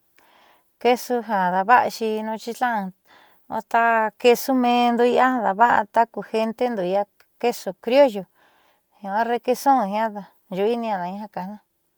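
Throughout the speech, the sound has a grainy, plainly breathy texture. This is likely Bluetooth LC3 compression. The transform coder quantises each short frame coarsely, which fits a 48 kbps stream with 10 ms frames. The bandwidth still reaches about 20.1 kHz.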